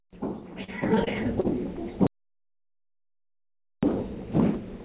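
From 0.64 to 1.46 s there's repeated packet loss, giving that choppy texture. A handful of short holes, the longest about 38 ms, get papered over by stretching the last bit of sound, so roughly 14% of that stretch is concealment rather than real audio. Everything is band-limited to 4 kHz, which fits a G.711 call path at 64 kbps.

Then at 2.07 s the audio drops out to silence, with no room tone at all, until 3.83 s, so about 1.75 s is simply gone. That's likely the input being lost, through a dropped link or a device cutting out, while the recorder kept writing silence.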